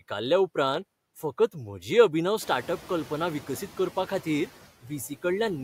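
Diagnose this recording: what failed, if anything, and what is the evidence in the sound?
In the call-processing stage, the noise suppressor is attenuating the bands it judges to be steady noise, pulling the background down by about 10 dB between phrases. The residual noise pumps frame to frame throughout the speech, most audibly after the room noise rises around 2.5 s.

At 4.82 to 4.91 s, the same noise suppressor cut speech, mistaking a soft stretch of it for noise. That segment drops by up to about 13 dB for roughly a tenth of a second, so the sound there is swallowed and faint.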